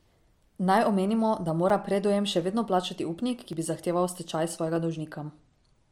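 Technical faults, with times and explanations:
1.70 s (between "omenimo da" and "predujem še vedno plačati"), 3.52 s (after "upnik") and 4.76 s (after "stečaj"): repeated buffer. Late audio caused one 5.8 ms block to play twice, which fits a 256-sample buffer. Each repeat is heard as a click or brief buzz with a hard join.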